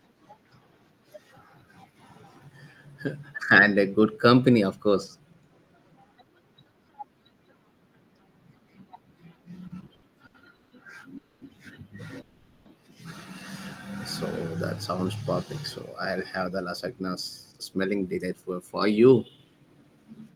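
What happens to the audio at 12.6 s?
A call audio freeze runs from 12.21 to 12.67 s, so 12.6 s falls near its end. Incoming packets were likely delayed long enough for the jitter buffer to drain. The receiver filled the roughly 440 ms gap by stretching the last sound into a fading buzz, with no silence. When the audio resumes it picks up exactly where it stopped. Nothing is lost, but everything after it now arrives about 440 ms later.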